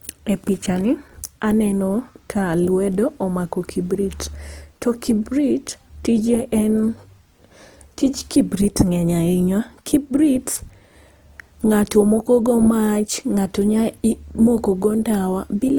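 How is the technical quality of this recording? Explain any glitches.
Quality is limited by one fault that runs through the whole recording. The speech is rough and grainy throughout, which is plainly audible Opus compression, likely at a low bitrate near 24 kbps. Starved bands are filled with noise or folded content instead of left empty.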